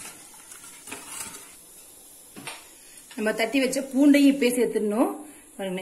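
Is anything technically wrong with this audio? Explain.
Yes. From 4.52 s to the end, the top end turns hollow and phasey. This is channel delay (comb filtering): one channel lags by roughly a tenth of a millisecond, a few samples, and the mono sum cancels evenly spaced notches starting near 5 kHz.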